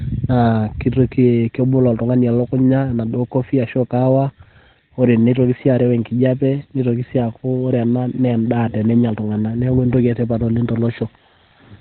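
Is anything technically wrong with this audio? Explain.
Yes. Opus compression runs throughout the clip: the speech is heavily damaged and nothing comes through above about 4.2 kHz. The damage is likely from Opus's SILK speech mode, which at a starved bitrate like 12 kbps drops to narrowband coding and rebuilds the voice from a compact model rather than keeping the full spectrum. The result sounds muffled and boxy, with a hoarse, rasping edge on the voice and none of the upper clarity.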